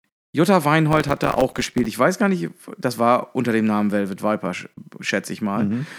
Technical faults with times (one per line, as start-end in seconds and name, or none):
0.92-1.90 processor overload crackle